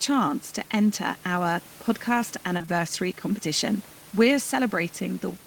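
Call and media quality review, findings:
Short concealed packet loss, 2.57 to 2.70 s, just after "to enter our podcast": three consecutive 20 ms gaps bridged by receiver concealment, heard as brief smear; room noise sits about 23 dB below speech.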